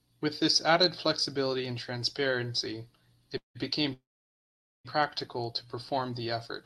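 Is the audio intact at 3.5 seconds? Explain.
No, a call audio freeze runs from 3.37 to 3.57 s, after "added flexibility and transparency". Likely delayed packets emptied the jitter buffer, leaving a fading buzz then about 130 ms of silence before "became practical to" resumes, with nothing lost.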